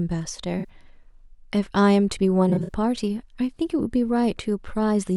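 At 0.59 s and again from 2.49 to 2.69 s, there is a corrupt frame concealed by the decoder. Damaged bits in the compressed frames were detected, and the decoder covered them with quiet or a scrambled echo of the last clean spectrum. The first event fits a couple of frames and the longer second one several.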